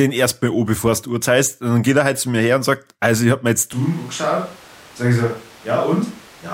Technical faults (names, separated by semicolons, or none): switch to a distant microphone